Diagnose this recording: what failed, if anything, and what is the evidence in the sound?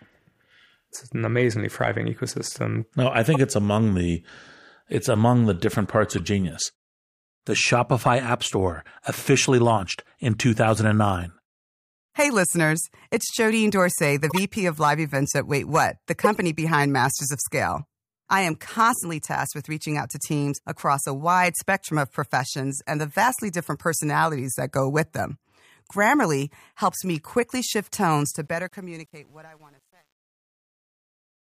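Short chirps and noise bursts at 3.34–3.36, 6.18–6.20, 14.30–14.40 and 16.18–16.38 s, the last loudest: corrupt frames decoded in the codec, misread bits misplacing energy.

The smooth fade-out turns gritty from 28.22 s and is worst from 28.77 s to the end. This is truncation distortion from an undithered fade stage, which fits 9-bit resolution.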